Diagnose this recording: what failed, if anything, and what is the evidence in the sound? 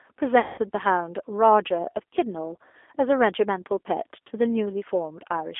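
The codec stage shows G.729 coding damage through the whole recording. The speech is confined to a telephone band of roughly 300 Hz to 3.5 kHz, with nothing above it, and has a plainly audible rough, synthetic texture. That texture matches an 8 kbit/s G.729A encoder: it models each 10 ms frame with a vocal-tract filter, a pitch predictor and a few fixed pulses rather than the actual waveform, so the fine detail is lost in the rebuilt speech.

The network stage has a fault, VoIP packet loss concealed by the speech codec, from about 0.40 s to 0.59 s. About 180 ms of audio went missing, which fits six 30 ms packets. Over that stretch, the decoder kept repeating its last pitch and filter state and lowered the gain frame by frame. This stretched the sound into a fading buzzy tone or coloured noise. Because each frame builds on the one before, the speech stays weakened briefly after real packets resume.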